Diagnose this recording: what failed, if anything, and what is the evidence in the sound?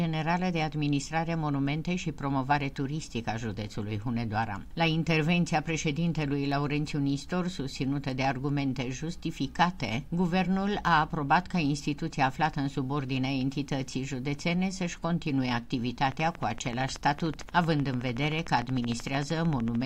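A train of clicks runs from 16.05 s to 19.84 s: around fifty near-identical pulses at a steady 13.2 per second, standing roughly 10 dB above the programme and audible as a regular ticking whether or not other sound is present. The even spacing and constant pulse shape point to a periodic injection rather than random damage, most likely electrical interference coupling into the analogue wiring or a faulty connection or power supply.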